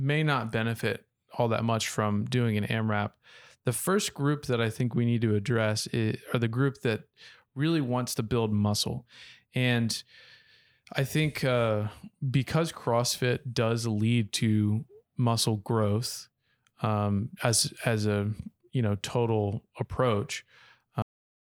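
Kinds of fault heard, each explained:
Cut-off end: Right after "you know total approach" the speech stops dead at about 21.02 s, mid-sound, dropping straight to digital silence with no natural decay. The final stretch of audio was never written out, so the recording ends abruptly partway through.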